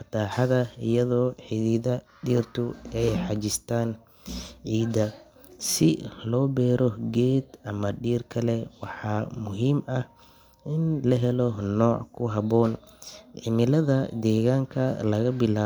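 No technical faults are audible.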